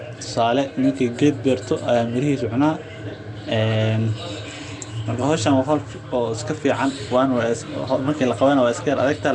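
Nellymoser compression throughout: the speech sounds rough, hissy and underwater, with nothing above 10.6 kHz, likely from the Nellymoser Asao codec filling bit-starved bands with noise.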